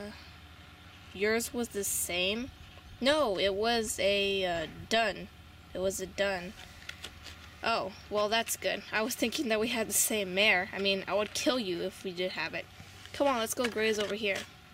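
No technical faults can be heard anywhere in the audio.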